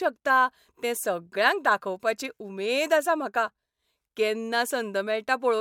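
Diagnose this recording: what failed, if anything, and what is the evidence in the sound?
Nothing in the chain appears to have failed: the speech signal stays continuous and intact throughout, with no audible event that points to any stage between capture and playback.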